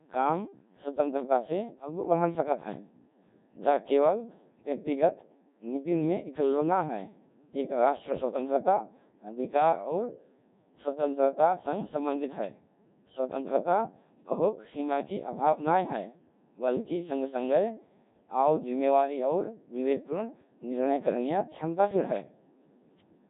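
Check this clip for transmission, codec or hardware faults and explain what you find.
The speech has been through a Codec 2 vocoder across its entire length, with heavy damage. Throughout, the voice sounds robotic and buzzy, which fits a very low rate around 1.3 kbit/s. The decoder rebuilds speech from pitch, voicing, energy and a coarse spectral envelope using sine waves, discarding the original waveform. On a spectrogram, harmonics look unnaturally regular and the upper spectrum smeared; the waveform's shape won't match natural speech.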